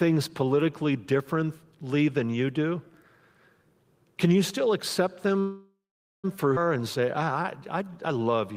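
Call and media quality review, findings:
Call audio freeze, 5.39 to 6.26 s, right after "can you still accept". The last sound is stretched into a fading buzz or hiss, then silence for about 0.48 s. Speech resumes exactly where it stopped. Likely jitter buffer underrun from delayed packets. Adds 0.84 s of delay.

Skip ahead, 6.56 to 6.58 s. An abrupt forward jump with almost no gap, only 8 ms of fill. About half a second of speech is gone, and the two sides are spliced nearly directly. Audio dropped in transit or discarded by an overflowing jitter buffer.

Jitter buffer slow-down, 6.77 to 8.54 s. Speech plays at 92% speed with pitch unchanged. Sounds are drawn out. The receiver repeats single pitch periods to rebuild its reserve, adding 149 ms.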